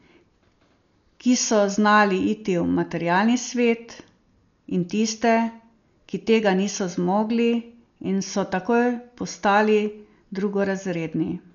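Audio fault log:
Throughout: Dolby Digital compression. The speech sounds dull and boxed in, with nothing above 7.1 kHz. A rough, fluttering noise clings to the voiced sounds. The damage is heavy and fits a bitrate of about 48 kbps. The cause is likely an AC-3 style encoder starved of bits. It cuts the upper band and leaves many frequency lines with no detail. The decoder then fills those gaps with noise, which produces the flutter.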